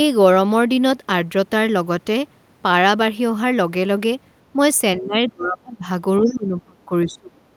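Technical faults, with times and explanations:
4.98–5.85 s and 6.19–7.42 s, speech suppressed in double talk: the speech sinks hard, by about 35 dB and then about 30 dB at worst. This is likely an echo canceller mistaking this side's speech, overlapping the far-end talk, for echo and clamping down on everything.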